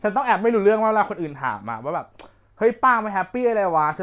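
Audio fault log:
No audible faults detected in this speech recording.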